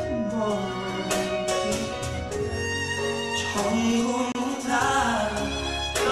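The sound drops out from 4.32 to 4.35 s. This is a gap at a join of encoded pieces: about 29 ms of untrimmed encoder delay and padding.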